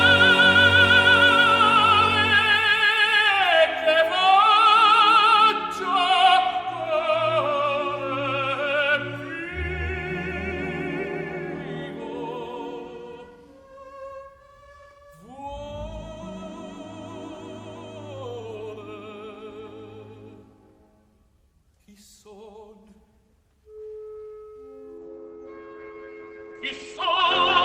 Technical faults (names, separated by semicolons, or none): adaptive stream at a lower bitrate